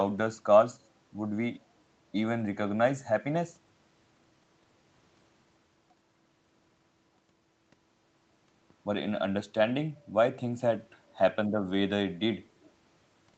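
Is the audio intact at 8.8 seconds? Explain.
Yes, the speech at 8.8 s is intact, with no fault at that moment beyond the ordinary call-path band limit that leaves nothing above about 8 kHz.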